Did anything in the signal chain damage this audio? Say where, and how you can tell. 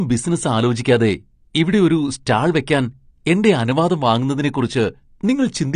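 Yes. AAC compression at the codec stage runs throughout the clip. The speech is dull and smeared, with a fizzy, warbling texture on sibilants and held sounds, and nothing reaches above 9.8 kHz. That hard ceiling and the swirling residue are the likely result of a lossy AAC-LC encode starved of bits, which fits a bitrate around 32 kbps. The encoder lowered its cut-off and quantised the remaining spectrum coarsely.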